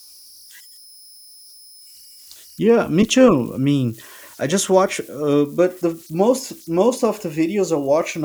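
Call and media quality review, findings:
Converter idle tones throughout the speech clip. Whistle near 5 kHz in pauses, grainy hiss under quiet passages, about 29 dB below signal. Probable component: undithered delta-sigma ADC. Small input locks it into repeating bit patterns, producing offset-dependent tones.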